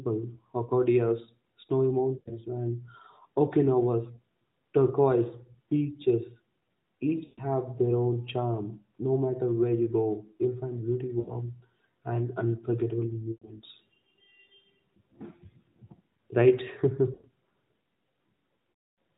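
Radio errors on this narrowband AMR speech call corrupted runs of frames, so the decoder had lost AMR speech frames to conceal, repeating the last good pitch and vocal tract settings at falling gain. At 2.18–2.41 s, 7.24–7.42 s (just before "their own charm"), 11.2–11.36 s (after "go you'll find beauty"), 13.32–13.49 s (after "and unforgettable"), 17.14–17.29 s and 18.72–18.98 s, the sound smears into a drawn-out sound and sags toward silence. The longest gap, near 260 ms, fades out completely before the audio returns weak or rough.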